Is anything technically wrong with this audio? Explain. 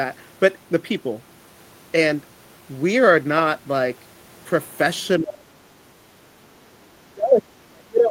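Yes. Speech dips deeply, roughly 30 dB, from 5.19 to 5.76 s and from 7.14 s to the end. This is likely speech suppressed in double talk. The echo canceller mistook overlapping talk for echo and turned it down.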